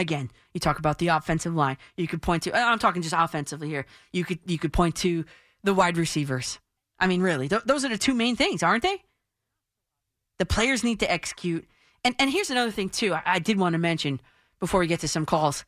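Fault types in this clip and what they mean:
Nothing to flag here, as the speech comes across without any audible faults at all.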